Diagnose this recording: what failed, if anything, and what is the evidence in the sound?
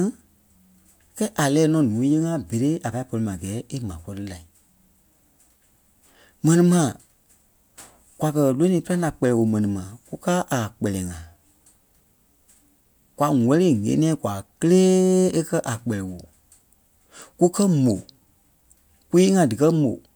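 Nothing failed in this recording, and the sound gives no evidence of a fault at any stage.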